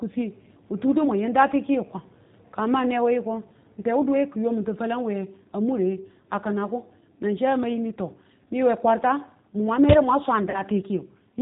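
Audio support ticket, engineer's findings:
G.729 codec throughout, speech band-limited to 4 kHz, rough and slightly synthetic: 8 kbit/s pulse-coded excitation through a vocal tract filter, and the damage is plainly audible.

VoIP packet loss concealed by the speech codec, 10.50 to 10.62 s: about 40 ms missing, which fits two lost packets. The decoder stretches the last pitch and filter into a fading buzzy tone or coloured noise, then takes a moment to recover.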